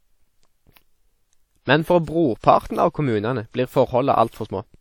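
A short speech recording carries plainly audible codec damage throughout, most likely WMA compression. The speech has a ringing, washy quality, with a hiss that swells and fades along with the speech. That fits a transform codec whose quantisation noise spreads across long blocks and whose weaker spectral detail is thrown away, which points to a low bitrate of around 48 kbps. On a spectrogram, the content stops sharply at 18.7 kHz. Below that cut-off, the fainter harmonics appear patchy and blotched rather than continuous, and noise fills the gaps between them.

Two attacks show pre-echo. The first runs from 2.39 to 2.44 s, about 43 ms. The second runs from 4.30 to 4.33 s, about 30 ms. In each case a short hiss arrives just ahead of the onset, and the onset itself sounds softened and smeared. This happens because the codec spreads noise sized for the loud attack across the quiet stretch of the block that precedes it. 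In the waveform, a low fuzz rises out of silence just before each transient. A spectrogram shows a broadband smear leading into the attack instead of a clean vertical edge.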